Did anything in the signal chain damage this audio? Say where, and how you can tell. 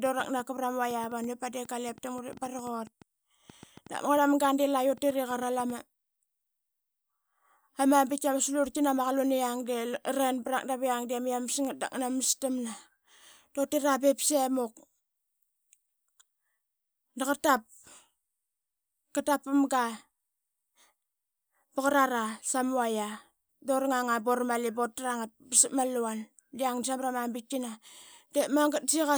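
Yes. A train of clicks runs from 0.06 to 5.71 s, around 30 similar pops at about 5.3 per second with uneven spacing, peaking roughly as loud as the speech. On a spectrogram they are thin vertical broadband lines; the waveform shows sharp spikes. Likely interference in the analogue wiring or a faulty connection or power supply.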